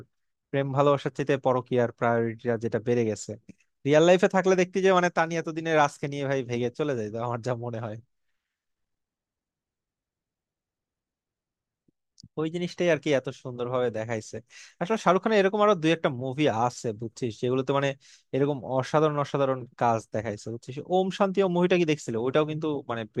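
No technical faults are audible anywhere in this speech.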